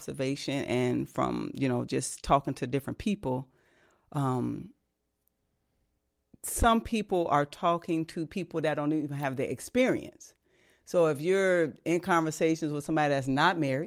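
Nothing goes wrong anywhere in this bit of speech, so there's no fault to point to at any moment.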